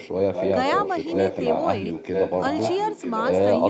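Echo leak runs through this speech clip, faintly from 0.00 to 0.09 s and then strongly from 0.33 to 1.63 s and 1.93 to 3.39 s. A copy of the voice returns almost a second late, well below the speech at first and then nearly as loud as it. The likely cause is a far-end loudspeaker whose echo canceller let its microphone pickup leak back into the call.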